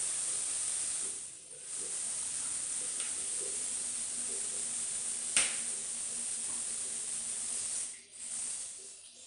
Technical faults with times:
0.00-9.27 4-bit ADPCM compression

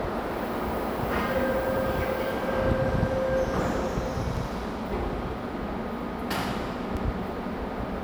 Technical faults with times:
1.77-1.87 overlapping chunks
4.37-4.47 overlapping chunks
6.97-7.07 overlapping chunks

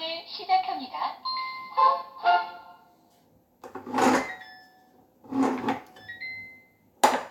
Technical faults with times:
none

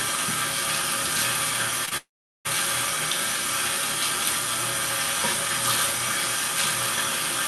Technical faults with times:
1.85-1.93 short concealed packet loss
1.97-2.47 long network dropout

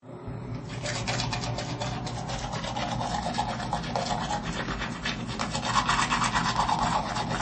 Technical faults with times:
0.00-7.41 MP3 compression

